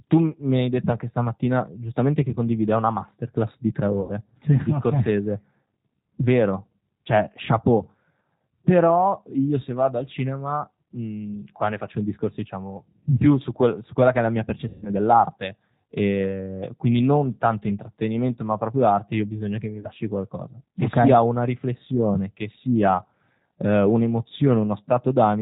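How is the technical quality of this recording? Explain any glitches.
The technical quality is limited. The whole clip carries audible G.729 codec coloration, and speech drops out briefly three times.

The G.729 codec affects all of it. Speech is rebuilt from a vocal-tract filter, a pitch predictor and a few pulses per frame. Nothing above 4 kHz survives. The result sounds rough, slightly synthetic and narrow, consistent with an 8 kbit/s stream.

VoIP packet loss concealed by the speech codec occurs at 4.01–4.13 s, 14.68–14.91 s and 19.80–19.89 s. Missing audio spans about 80, 140 and 40 ms respectively. The decoder extends its last pitch and filter, fading them. You hear a buzzy or noisy, decaying stretch, then weak speech briefly afterwards.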